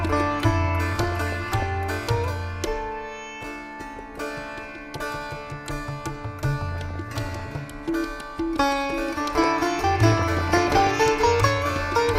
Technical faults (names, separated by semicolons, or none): DAB burbling